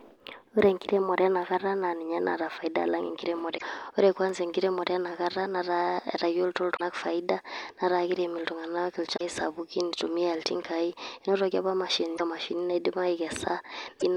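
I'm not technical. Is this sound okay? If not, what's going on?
No. The speech has five short glitches from damaged data in a compressed stream: 3.54–3.63 s right after "faida alang", 6.73–6.81 s just before "faida netaa kirem", 9.13–9.21 s, 12.14–12.21 s after "iltingai enotoki apa", and 13.96–14.03 s. At each spot part of the file is scrambled, so the player stumbles and the sound glitches briefly.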